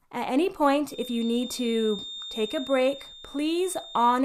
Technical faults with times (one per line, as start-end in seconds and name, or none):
0.85-4.24 feedback whistle